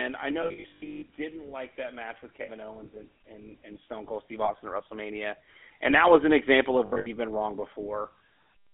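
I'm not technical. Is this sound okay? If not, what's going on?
No. The speech sounds buzzy, gravelly and thin throughout because it passed through the GSM full-rate codec, an early mobile-phone system that simplifies the voice and drops the high frequencies.

At 0.42 to 1.04 s, 2.42 to 2.49 s, 4.44 to 4.51 s and 6.86 to 7.07 s, the speech briefly turns into a rough metallic ring. These are lost GSM frames: missing chunks were filled by repeating the last good sound and letting it fade.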